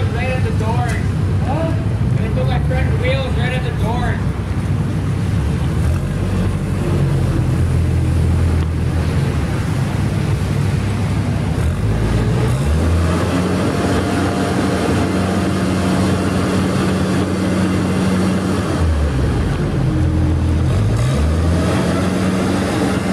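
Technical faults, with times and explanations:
Nothing technical stands out here; there's nothing to flag anywhere in the recording.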